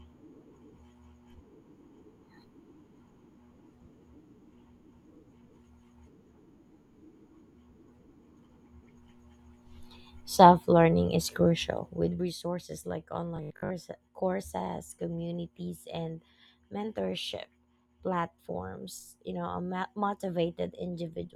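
From 11.79 to 12.33 s a fine ticking rides on the speech while its level falls by about 15 dB. This is zipper noise: the gain moves in coarse unsmoothed jumps, about a hundred per second, and every jump leaves a tiny click.

Between 13.37 and 13.71 s the speech turns into a hard, metallic buzz pitched at 50 Hz that only loosely tracks the syllables. This robotic sound likely comes from repeated short buffers, with a 20 ms block replayed to cover late audio, so most of that stretch is repeats.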